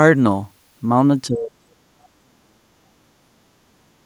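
From 1.27 s right through to the end of the clip, the speech keeps getting pulled down, in places by about 40 dB, so it drops away to almost nothing and comes back in broken pieces. That's speech suppressed in double talk, most likely: the echo canceller couldn't tell this talker apart from the loudspeaker echo while both sides were going at once, so it turned everything down. All told, roughly three seconds are affected.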